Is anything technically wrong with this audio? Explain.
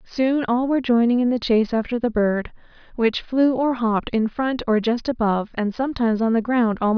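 No, nothing technically wrong can be heard anywhere in this speech recording.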